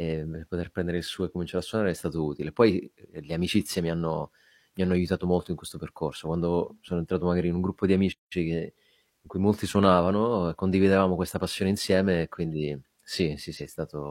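At 8.12 to 8.33 s the speech stops dead for about 186 ms of silence, then resumes. This is a playback stall. The player likely ran short of data, or its thread was blocked, so output halted until it caught up.

At 13.56 to 13.61 s, compressed frames are skipped. Roughly one frame, about 50 ms of audio, is lost, which fits a frame length near 46 ms. The speech jumps forward.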